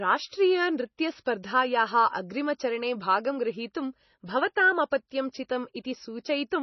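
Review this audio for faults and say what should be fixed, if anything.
Heavy MP3 compression damage runs through the whole speech clip. Nothing is present above 6 kHz, so sibilants sound dull and clipped, and the remaining band has a watery, swirling texture with smeared consonant onsets. This is likely a low-bitrate MP3 encode, consistent with roughly 24 kbps: short of bits, the encoder drops the top band and zeroes weak spectral lines frame by frame, so detail flickers in and out. Re-source or re-encode from the original at a higher bitrate, or use lossless delivery.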